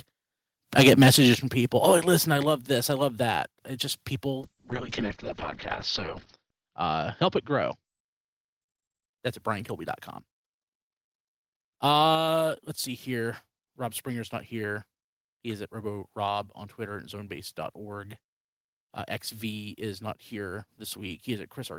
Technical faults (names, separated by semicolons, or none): microphone volume stepped down; call bitrate drop